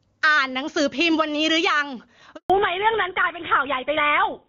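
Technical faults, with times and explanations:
Throughout: gain pumping, level ducking by roughly 10 dB under loud speech, likely from excessive mic gain driving a fast limiter.
2.36 to 2.50 s: handover gap, speech fades out and goes silent for 140 ms while the call switches networks, so that audio is lost.
2.50 s to end: fallback to narrowband, the HD Voice link gives way to a narrowband codec, consistent with GSM full rate, removing everything above 4 kHz and leaving speech duller and rougher.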